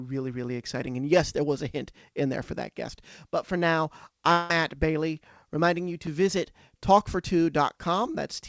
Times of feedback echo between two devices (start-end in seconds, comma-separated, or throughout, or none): none